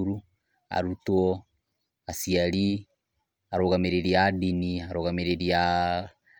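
No technical faults can be heard anywhere in the recording.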